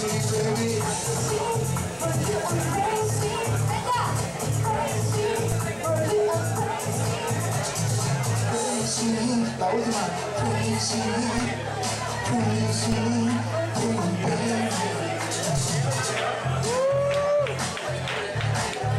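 A low thump or click lands at 5.52, 11.38, 12.92 and 15.57 seconds while the sound carries on unchanged. Each is a DC step: the waveform's zero line jumps suddenly, then the offset drains away as a 20 Hz high-pass filter pulls it back.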